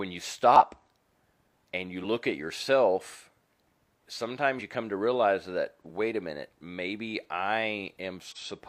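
Four brief interruptions break the speech, each marking a small forward jump: at 0.51 s about a tenth of a second vanishes, then roughly 50 ms goes missing at 2.0 s between "and you" and "at yourself", at 4.55 s just before "you come to realize", and at 8.32 s. These are compressed frames skipped. Whole coded frames were lost or rejected by the decoder, so the audio jumps ahead by the length of the frames left out.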